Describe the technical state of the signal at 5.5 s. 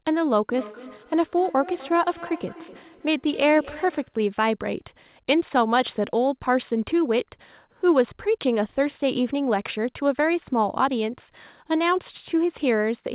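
At 5.5 s the speech is intact, with no dropout, glitch or distortion, only the ordinary narrowband character of the call path, whose content stops at about 4 kHz, which fits a G.711 A-law telephone codec.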